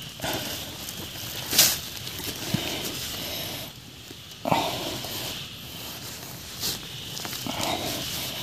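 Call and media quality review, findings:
Repeated frames at 2.18 to 2.24 s: a short stutter where about 52 ms of audio plays once more straight after itself. This fits a run of two compressed frames duplicated in the encoder output or transport before decoding. The decoder played the duplicate block as new audio, adding 52.2 ms to the stream. Probable component: packetiser, writer or jitter buffer re-sending the same frames.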